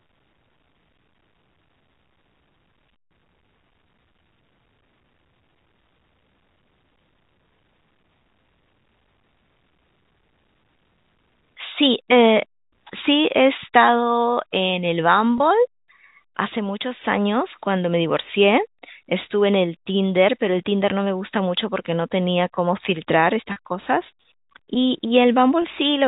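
Around 15.38 to 15.40 s, 23.52 to 23.56 s and 25.62 to 25.64 s, there's packet loss with pitch repetition. The receiver loops the last pitch period to plug each gap, giving a brief buzzy hold. The middle one runs 40 ms, twice the others.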